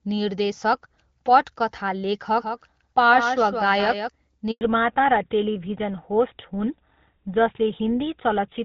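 A doubled audio track runs from 2.37 to 4.09 s. The speech is heard twice, with a second full-band copy trailing roughly 150 ms behind the original and only about 5 dB quieter. That gap is too long to fuse into one sound, so each syllable gets a distinct echo, yet there is no decay tail or room colouring. The copy cuts in and out abruptly at those times, which points to a likely cause of a second capture path or a misaligned edit.

A handover gap follows at 4.51 s and lasts 100 ms, ending at 4.61 s. While the call was being passed from one network to another, no speech frames reached the receiver. The speech fades out within a few tens of milliseconds and then goes silent until the new link comes up, so whatever was said during that tenth of a second is gone and cannot be recovered.

Fallback to narrowband starts at 4.61 s and lasts to the end of the clip. Before the gap the call carries HD Voice, with the light coding texture of AMR-WB at 12.65 kbit/s. 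After the new link comes up, nothing above 4 kHz remains. The speech turns duller and rougher, which fits the call having dropped to an older narrowband codec such as GSM full rate.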